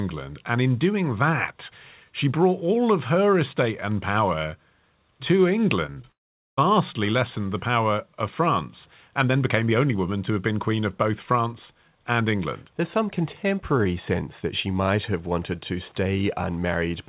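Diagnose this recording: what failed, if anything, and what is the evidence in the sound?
Short concealed packet loss occurs at the network and jitter-buffer stage at 5.86 to 5.90 s, 5.92 to 5.98 s and 6.02 to 6.06 s, with 20 to 40 ms missing each time. Each gap gives a brief smear where the receiver extended the last sound and blended back. Unlike a dropout, the speech resumes within hundredths of a second.

Right after, from 6.12 to 6.59 s, about 460 ms of speech is missing. A short fill decays into silence for roughly 440 ms, then speech returns further on. The likely cause is a long network dropout. Unlike the brief concealments, this gap lasts long enough for the fill to die away. The lack of anything above 4 kHz comes from the G.711 mu-law call codec, not from the loss.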